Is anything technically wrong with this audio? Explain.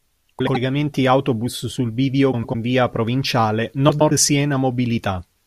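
Yes. Frames out of order at 0.39, 2.32 and 3.89 s. Two adjacent blocks, about 80 or 100 ms each, swapped places. Each stretch flutters.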